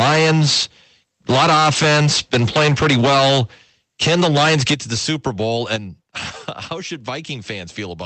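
Microphone overload at 0.0–0.64 s, 1.29–3.42 s and 4.01–5.76 s: peaks push about 13 to 15 dB past the converter's limit, likely from excessive input volume. Their flattened tops give loud syllables a harsh crackle, on about 40% of the samples at first and fewer later.

Microphone volume stepped down at 3.05 s (about 2 dB), 4.74 s (about 9 dB) and 5.76 s (about 7 dB): the level drops abruptly, likely software cutting input gain after detecting clipping.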